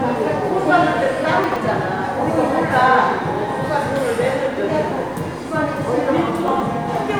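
At 1.44 to 1.56 s, and again at 6.48 to 6.6 s, the chunks are out of order. A 40 ms block plays two blocks late, after those meant to follow it. Nothing drops out, but three hard joins give a brief jumbled stutter.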